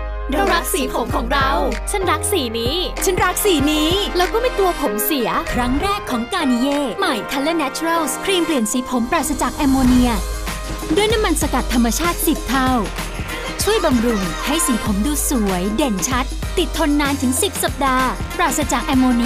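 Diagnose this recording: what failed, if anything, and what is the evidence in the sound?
Nothing failed in this recording, and no stage between capture and playback leaves a mark on the sound. There is no audible event anywhere in the audio that points to a problem.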